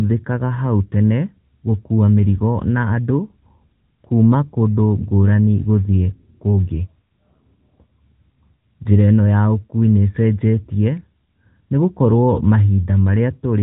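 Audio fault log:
throughout AMR narrowband mobile codec: the speech has the boxed-in sound of a 2G/3G call, with nothing above 4 kHz, which points to 8 kHz sampling. The codec rebuilds the voice from a vocal-tract filter excited by a handful of pulses per 5 ms subframe. That model leaves a plainly audible buzzy, synthetic edge on the voice, which fits an upper AMR-NB mode of about 10.2 kbps.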